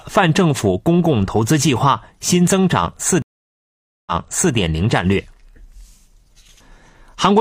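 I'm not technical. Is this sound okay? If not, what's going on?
No. At 3.22 seconds the speech cuts out for about 0.85 seconds. This is a stream reconnect. The connection dropped, so the player went quiet, connected again and restarted playback partway through. When the speech returns, it picks up about half a second earlier than where it stopped. The server sent some audio a second time, so you hear a short stretch repeated. The whole disturbance is over by 4.54 seconds.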